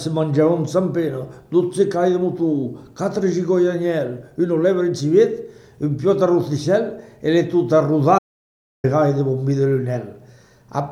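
At 8.19 s the sound cuts off abruptly into dead silence, with no room tone at all, and resumes mid-flow at 8.84 s, so about 0.65 s is simply missing. This audio dropout to silence is likely the input link failing briefly while recording continued.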